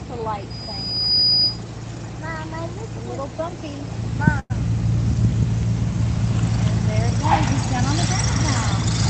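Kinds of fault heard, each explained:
Call audio freeze: from 4.39 to 4.52 s the sound smears into a fading buzz, then briefly drops out, likely a drained jitter buffer; nothing is lost.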